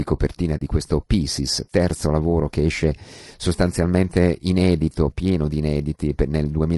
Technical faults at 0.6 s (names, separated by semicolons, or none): low-delay AAC compression; AAC frame loss with muting